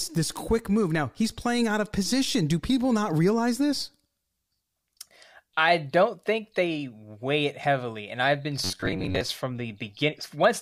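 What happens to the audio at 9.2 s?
Audio likely arrived too seldom, so from 8.64 to 9.21 s playback loops a buffer of about 10.7 ms in place of roughly half the real material. This robotic sound from repeated short buffers forces a rigid 93.8 Hz metallic buzz onto the speech.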